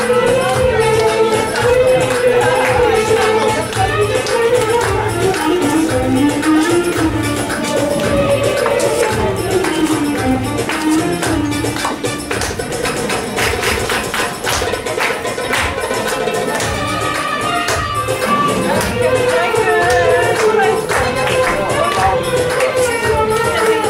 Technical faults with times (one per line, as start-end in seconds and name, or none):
12.83-14.47 doubled audio track